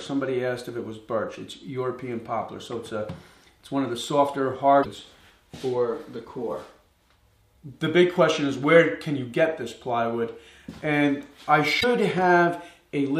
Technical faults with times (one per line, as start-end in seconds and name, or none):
4.79-4.86 damaged data in a compressed stream
11.77-11.84 damaged data in a compressed stream